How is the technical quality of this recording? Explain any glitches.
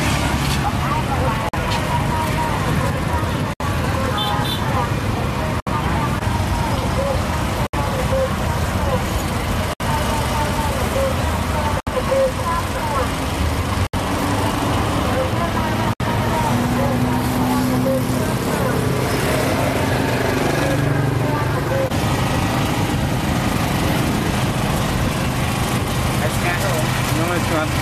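There's a recurring glitch: a gap at a join of encoded pieces at 1.49, 3.53, 5.60, 7.67, 9.73, 11.80, 13.87 and 15.93 s, roughly every 2 s. Separately encoded chunks were butted together untrimmed, so encoder delay and padding leave silent holes, 47 ms first and then 67 ms each, with smeared edges before the sound resumes.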